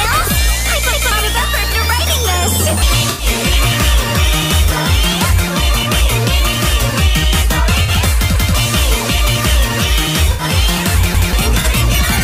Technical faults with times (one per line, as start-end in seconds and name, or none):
0.93-1.11 repeated buffer
3.10-3.25 corrupt frame concealed
7.83-7.90 corrupt frame concealed
8.36-8.54 repeated buffer
10.32-10.42 corrupt frame concealed
11.15-11.33 repeated buffer
11.59-11.67 corrupt frame concealed